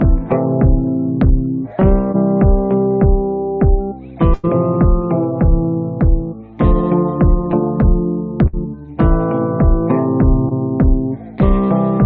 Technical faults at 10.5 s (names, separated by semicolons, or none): short concealed packet loss